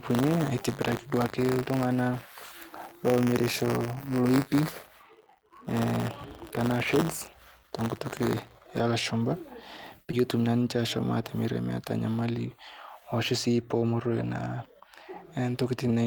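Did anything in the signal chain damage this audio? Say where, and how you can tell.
Yes. From 0 to 8.80 s there is buffer tearing at the driver or buffer stage: a steady 100 Hz robotic rattle riding on the speech, which fits a 10 ms period. The writer and reader cross inside each period, so a small slice of every buffer replays audio a few tens of milliseconds old, spliced in with hard edges. A waveform shows discontinuities every 10 ms, and a spectrogram shows broadband vertical striations at that spacing, only where there is signal.

At 10.11 to 10.15 s there is short concealed packet loss at the network stage. About 20 ms of audio never reached the decoder, and roughly 13 ms of it was filled by extending the preceding sound before crossfading back. It is heard as a brief smear. A spectrogram shows the preceding sound carried on across that gap, with a soft join on the waveform.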